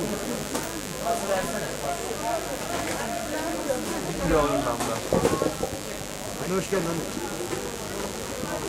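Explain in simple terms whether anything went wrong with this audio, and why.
Electrical interference from the 50 Hz mains supply leaked into the recording, adding a fairly loud, steady, raspy mains buzz from start to finish.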